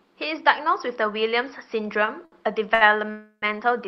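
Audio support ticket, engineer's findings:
Short stalls from late packets at 2.05–2.10 s, 2.25–2.35 s and 2.74–2.84 s. Speech is held too long, with a slight buzz. Jitter buffer ran empty. The receiver stretched about 19, 68 and 71 ms to cover the late packets. Nothing lost, timing pushed back.

Call audio freeze at 3.11–3.45 s. Sound continues as a fading buzz, then about 80 ms of silence, then resumes where it stopped. Likely cause: packets held up in transit, jitter buffer underrun, roughly 310 ms of filled gap inserted.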